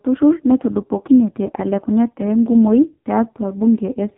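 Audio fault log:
Throughout, AMR narrowband mobile codec: nothing passes above 3.8 kHz, and the voice sounds heavily buzzy and synthetic, since each 20 ms frame is rebuilt from a vocal-tract model driven by very few pulses, which fits a low mode near 5 kbps.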